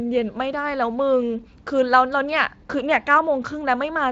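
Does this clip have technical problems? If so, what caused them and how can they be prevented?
No, nothing in this speech clip needs fixing.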